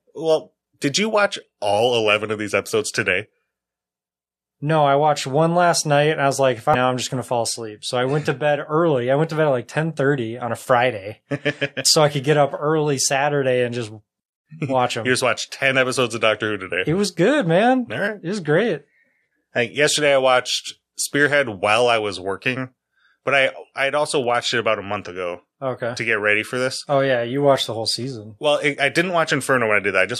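Damaged data in a compressed stream appears at 6.74 to 6.76 s, between "was like if I" and "I'm just gonna fall". The corrupted data makes the decoder lose sync and hunt for the next valid header, leaving a brief glitch in the speech.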